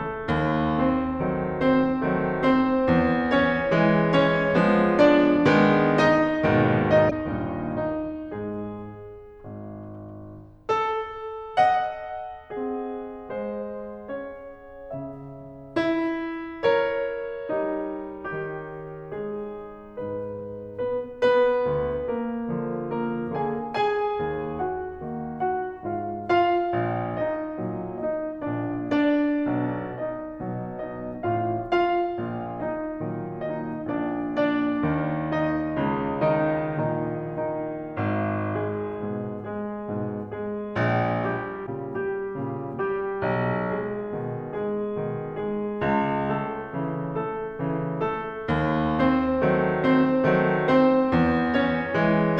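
At 7.07–7.12 s and 41.63–41.68 s the music briefly breaks up: damaged data in a compressed stream. The decoder misreads corrupted frames and loses sync while it searches for the next frame header.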